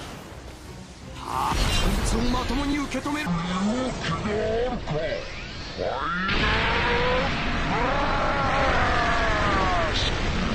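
From 3.26 s to the end, a section at the wrong speed: the audio runs at 0.549 times its recorded rate, likely because it was played against the wrong clock. Speed and pitch fall together, so the sound becomes slow, drawn out and roughly ten semitones lower.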